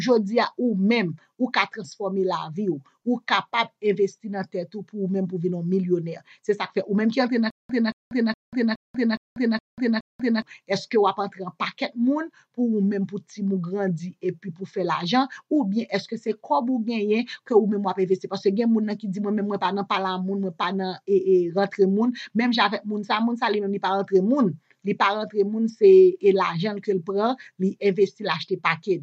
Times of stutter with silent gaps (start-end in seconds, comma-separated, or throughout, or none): 7.50-10.42